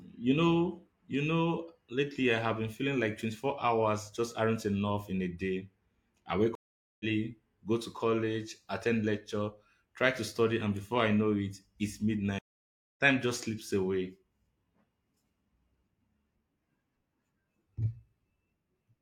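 At 6.55 s the speech drops out for about 0.45 s and comes back at 7.05 s, and at 12.39 s it happens again, this time with a gap of roughly 0.57 s before things pick up at 13.0 s. Both are a stream reconnect: the connection broke, the player went quiet, reconnected and started a fresh decoder mid-stream. When the speech resumes it has skipped ahead, by about a third of a second the first time and around half a second the second time.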